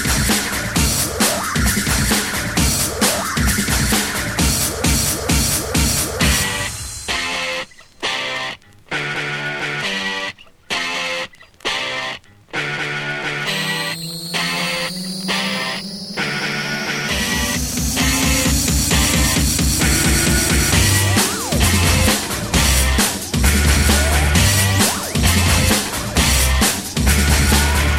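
No technical faults can be heard anywhere in this audio. Nothing in the sound points to a problem in how it was captured, processed or delivered.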